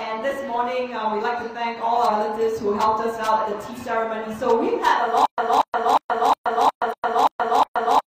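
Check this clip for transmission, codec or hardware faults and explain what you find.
Two kinds of fault are present: compressed frames skipped, three times, and a stutter with silent gaps that runs to the end.

Compressed frames skipped occurs at 2.05 s, 3.72 s and 6.88 s. Whole frames of coded audio never reached the output. The jumps fit frames of about 46 ms. Roughly 100 ms is lost at 2.05 s, about 50 ms at 3.72 s, and about 150 ms at 6.88 s.

The stutter with silent gaps starts at 5.26 s and continues to the end. A 235 ms fragment plays, then about 124 ms of dead digital silence follows. The cycle repeats every 359 ms, eight times in all. The likely cause is a stalled player or stream that replays its last buffer on each retry, then runs dry. The audio meant for this stretch never plays.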